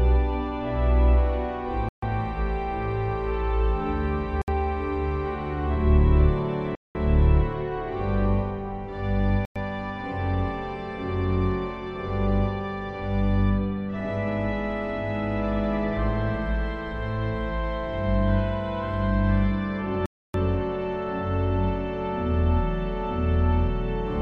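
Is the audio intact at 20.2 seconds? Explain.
No. A Bluetooth stall, likely from interference delaying packets until the headphone buffer emptied, cuts the sound to silence for 0.28 s, from 20.06 to 20.34 s.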